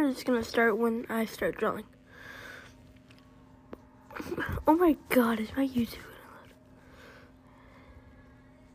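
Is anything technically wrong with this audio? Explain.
Yes. Mains buzz runs from 1.43 s to 3.41 s. Something on the 50 Hz supply, such as a dimmer, a rectifier or an unshielded cable, is injecting sharp switching spikes twice per mains cycle. Those spikes carry harmonics of 50 Hz stacked up into the kilohertz range. It sits roughly 40 dB below the wanted sound, so it is quiet, but it comes through as a steady, raspy buzz.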